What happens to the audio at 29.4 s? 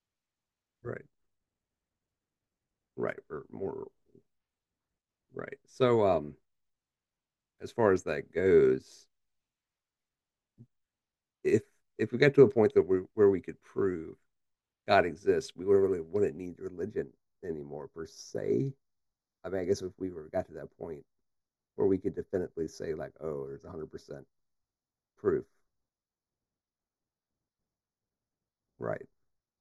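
At 29.4 s the speech has channel delay (comb filtering). It begins at 16.46 s and lasts to the end of the clip. One channel runs late by roughly 0.2 ms, and the two channels are summed to mono. Content common to both cancels at evenly spaced frequencies. The first notch falls around 3 kHz, with more above it. The voice sounds hollow and phasey, with fixed notches.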